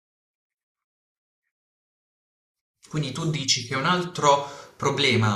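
No technical faults can be heard anywhere in this speech recording.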